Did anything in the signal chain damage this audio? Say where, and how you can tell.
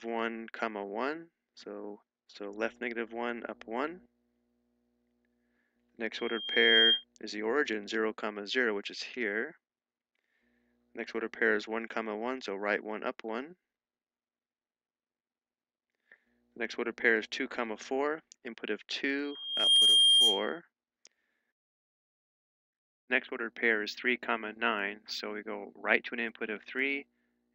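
Yes. A pure 3.2 kHz tone swells up at 6.13–7.04 s and again at 19.24–20.60 s, rising within about 0.7 s and 0.5 s respectively to roughly 10 dB above the sound. This is loudspeaker feedback squeal at the analogue stage: the microphone re-captures its own loudspeaker, and the loop gain at 3.2 kHz exceeds one.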